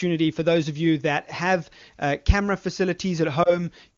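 At 3.43 s a radio error makes one 20 ms frame fail its checksum: a lost AMR speech frame. The HD Voice decoder reuses the last good pitch and vocal tract settings at lower gain. This gives a brief dip or warble, and the voice comes back weak or rough until about 3.64 s.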